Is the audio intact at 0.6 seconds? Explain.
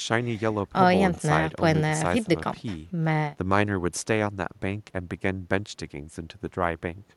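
Yes, the audio is intact at 0.6 seconds, with no fault at that moment.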